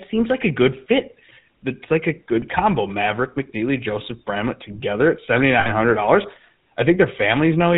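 From start to finish the speech has a buzzy, gravelly roughness, with a dull top end and nothing above 4 kHz. The damage is plainly audible. This is the GSM full-rate codec. It models the vocal tract and drives that model with a sparse pulse train, keeping only one excitation sample in three, and at a rate that fits its 13 kbps it can't carry the fine detail of the voice.

Between 5.6 and 5.71 s, just after "together at seventy" and before "hundred dollars", the voice stops moving and turns into a brief rough, metallic ring. These are lost GSM frames. The decoder had no valid data for about 60 ms, which fits three lost frames, so it kept repeating the settings of the last good frame in place of the missing sound.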